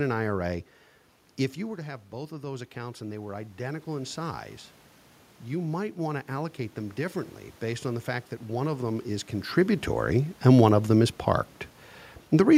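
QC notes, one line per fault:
1.55–4.51 s, automatic gain rising: after the input drops about 12 dB, gain creeps up about 7 dB, so voice and room noise swell together, visible as a slowly rising waveform envelope and spectrogram noise floor.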